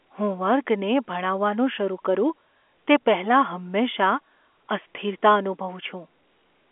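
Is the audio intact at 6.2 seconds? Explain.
Yes, the audio is intact at 6.2 seconds: no fault occurs there, and the speech passes through the G.711 telephone coding as expected.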